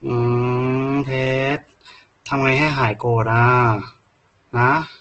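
Opus compression runs through the whole clip, from start to finish. The speech sounds rough, grainy and noisy rather than swirly, and nothing comes through above 8.2 kHz. This points to a very low bitrate, likely around 12 kbps in Opus's music-oriented CELT mode. Short of bits, the encoder keeps each band's energy but fills the detail by folding lower bands upward or inserting noise. That replaces the true texture with coarse, hissy grain.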